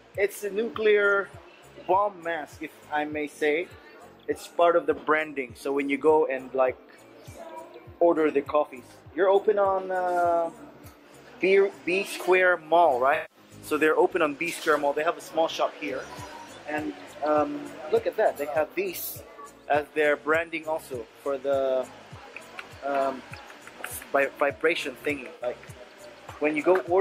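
A smeared, noisy patch at 13.14 to 13.37 s and a shorter phasey blur at 25.35 to 25.45 s mark AAC frame loss with concealment: the decoder lost roughly 150 ms and then 64 ms of frames, which fits runs of about seven and three, and patched each gap from the last good spectrum.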